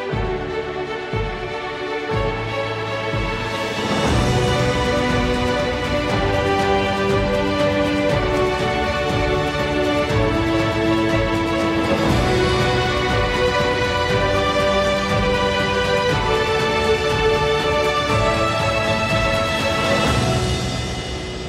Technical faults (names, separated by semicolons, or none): none